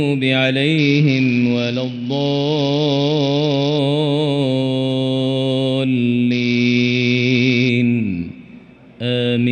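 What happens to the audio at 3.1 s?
A Bluetooth SBC bit pool drop spans 0.78 to 3.79 s. The encoder gets too few bits, so the treble dulls and a gritty noise rises.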